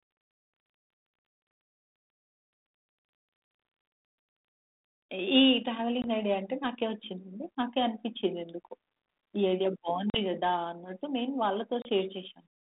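Packet loss on an ADPCM call hits at 6.02, 10.1 and 11.82 s, silencing 20, 40 and 30 ms. The decoder's predictor loses track, so speech resumes briefly distorted.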